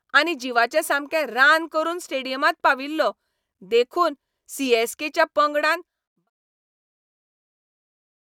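Speech clip, no technical faults.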